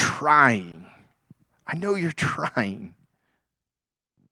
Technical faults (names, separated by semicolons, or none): short concealed packet loss